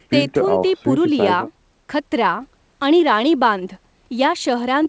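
The speech shows no technical faults, with content stopping at 8 kHz in the way a G.722 wideband call link would leave it and the lowest bass trimmed as normal call microphone processing does.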